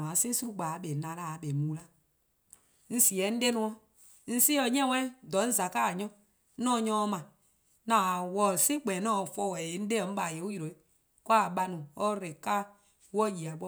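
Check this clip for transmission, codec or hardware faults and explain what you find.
Nothing stood out on listening to this speech recording.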